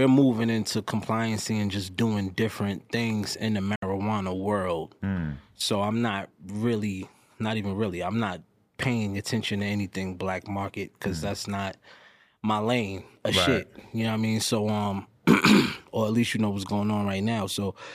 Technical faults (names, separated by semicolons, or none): digital broadcast dropout